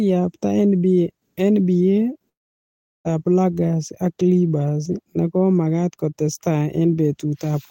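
At 2.29 s the speech breaks off in what is likely a long network dropout: the stream stopped delivering audio, and the receiver had nothing real to play for about 0.77 s. It briefly extended the last sound as a fading buzz, then settled into near silence lasting roughly three quarters of a second. Speech returns at 3.07 s, picking up further along, with about 0.76 s of the original simply gone.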